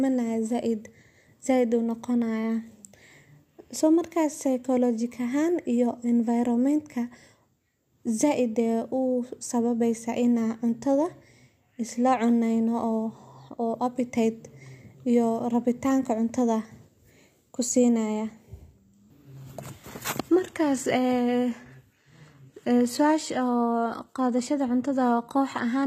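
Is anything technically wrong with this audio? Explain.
Yes. From 19.23 s to the end, an adaptive stream at a lower bitrate kicks in: the player likely dropped to a leaner version, fitting roughly 20 kbit/s HE-AAC, as the connection slowed. Quality falls suddenly with no gap, treble drops, and nothing remains above 14.9 kHz.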